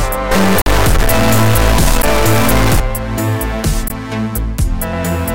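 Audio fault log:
0.31–2.80 s, stuck bit: Distortion rides on the sound, and quieter stretches pick up noise instead of falling silent. The likely cause is one data bit held fixed at 0 or 1, so about half the sample values are knocked off by that bit's weight in a pattern that follows the waveform. Because the bit also flips with the sign of small values, low-level passages fill with noise.
0.62 s, 2.02 s, 3.88 s, block of digital silence: Each is a sharp tick or short dropout. The one at 0.62 s is the longest, about 46 ms, and is heard as a brief hole. The one at 2.02 s lasts about 12 ms and is heard as a tick or dip, and the one at 3.88 s lasts about 19 ms. The signal drops straight to silence and returns with no fade. The first two lengths fit 2048-sample and 512-sample buffers that were not filled in time.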